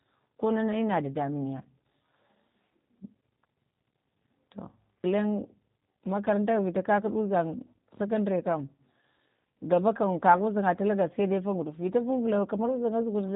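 Throughout the speech, G.729 codec damage is plainly audible: rough, slightly synthetic voicing, consistent with an 8 kbit/s coder. It rebuilds each frame from a vocal-tract filter and a few pulses. A spectrogram shows a hard ceiling near 3.8 kHz, with nothing above it.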